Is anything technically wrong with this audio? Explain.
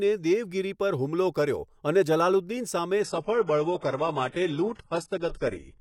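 Yes. From 3.03 s to the end of the speech, the stream drops to a lower bitrate. The connection likely slowed, so the player switched versions without a gap. The treble drops, nothing sounds above 11.5 kHz, and the swishy artefacts suggest a very low-bitrate HE-AAC encoding. Unlike a dropout, the sound never stops.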